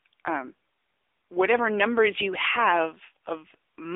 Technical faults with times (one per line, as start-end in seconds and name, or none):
0.00-3.96 AMR narrowband mobile codec